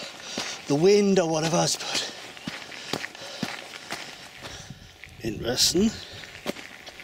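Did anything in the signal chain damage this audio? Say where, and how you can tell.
No, nothing audible points to damage at any stage of the chain, so there is nothing to locate or attribute.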